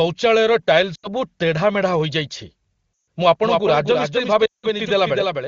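Lost AMR speech frames at 0.95 to 1.07 s, 2.93 to 3.07 s and 4.46 to 4.66 s: corrupted frames were concealed by repeating the last good settings at falling gain, so the sound fades to near silence for 80, 140 and then 180 ms. A doubled audio track begins abruptly at 3.42 s and runs to the end. A second, somewhat quieter copy trails about a third of a second behind without any room colour, likely from a slower second capture path.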